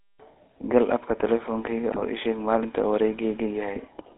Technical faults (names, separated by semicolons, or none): GSM full-rate codec; GSM bit errors